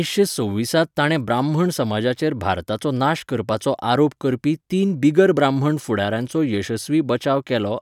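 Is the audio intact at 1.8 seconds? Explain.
Yes, the speech at 1.8 seconds plays through intact, with no dropout, click, distortion or other fault at that point.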